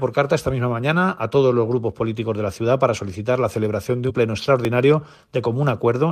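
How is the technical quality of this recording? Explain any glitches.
The recording has three short glitches of two kinds.

At 2.97 s and again at 4.65 s there are jumps where the sound skips ahead with no gap. The likely cause is a dropped buffer (overrun): the software failed to collect incoming samples before the hardware overwrote them. Roughly 3 ms is lost at the first point and a little over 1 ms at the second, and the two sides join directly.

From 4.09 to 4.11 s, damaged data in a compressed stream corrupts a stretch of the encoded audio. The decoder can't read those frames properly, loses sync and has to search for the next valid frame header. In the sound this is a brief chirp, squawk, click or short hole about 20 ms long.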